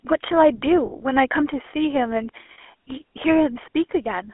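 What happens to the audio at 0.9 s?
From 0.86 to 0.93 s, lost GSM frames leave a gap of about 60 ms, consistent with three missing 20 ms frames. The decoder repeats the last good frame's settings, so the sound freezes into a rough, metallic ring. A spectrogram shows smeared, unchanging bands, and the waveform shows a repetitive pattern.

All of this sits inside the GSM full-rate codec running through the whole clip, whose quality points to a rate near 13 kbps. Coarse pulse excitation adds a plainly audible buzzy, gravelly roughness, and the line band of 300 Hz to 3.4 kHz leaves a spectrogram empty above 3.4 kHz.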